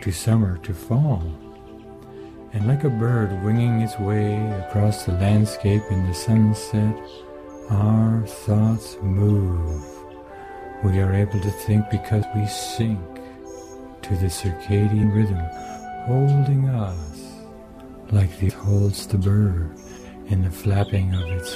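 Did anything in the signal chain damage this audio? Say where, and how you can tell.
Yes, at the codec stage: damaged data in a compressed stream produces brief glitches at 12.22 s, 15.03 s and 18.49 to 18.51 s. Corrupted bytes make the decoder misread frames and resync, giving a brief disruption at each point.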